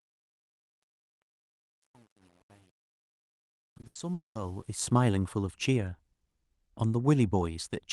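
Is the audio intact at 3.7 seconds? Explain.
No. Truncation distortion on a fade runs from 0.0 to 4.94 s and is at its worst up to 4.24 s. As the fade-in climbs from near silence, the level is held to too few steps with no dither, which fits roughly a 9-bit stage. The quiet waveform becomes coarse stair-steps, so 3.7 s sounds gritty.

Repeated packet loss (robotic sound) also covers 3.59 to 3.97 s. Four short dropouts, the longest 80 ms, are each patched by stretching the preceding sound, and about 37% of that stretch is concealed. The audio there turns choppy, with pieces missing.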